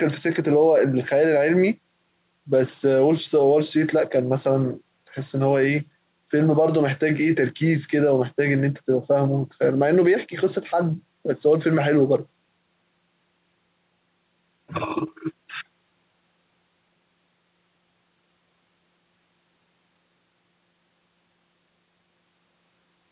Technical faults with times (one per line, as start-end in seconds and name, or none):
none